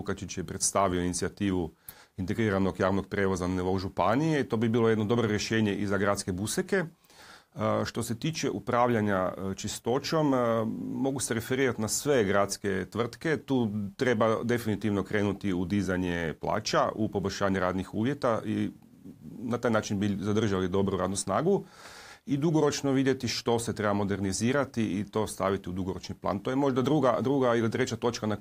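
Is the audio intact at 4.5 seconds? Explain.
Yes, at 4.5 seconds the audio runs cleanly, with no dropout, click, distortion or other fault at that point.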